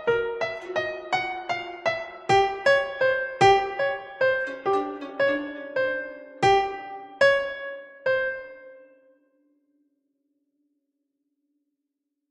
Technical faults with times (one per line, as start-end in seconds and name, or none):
none